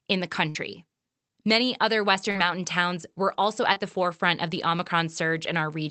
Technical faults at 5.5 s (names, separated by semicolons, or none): none